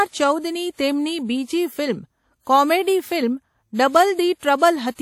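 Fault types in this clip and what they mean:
WMA compression: The speech has likely been through a Windows Media Audio encoder, a transform codec working on long blocks, and the damage is plainly audible, which fits a low bitrate of around 48 kbps. Quantisation noise is smeared across tens of milliseconds, so the sound rings and turns washy, with a hiss that swells and fades along with the speech. Weak detail is zeroed out, and nothing remains above 18 kHz.
pre-echo: At about 4.62 s a sharp attack falls late in a coding block, so the encoder spreads noise that was sized for the loud onset back over the quiet moment just before it. About 36 ms of hiss runs ahead of the attack, from 4.58 s out to roughly 4.62 s. The onset itself arrives soft and smeared.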